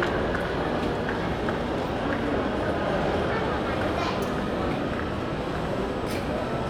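Listening through this recording of sounds, nothing stood out as a technical problem.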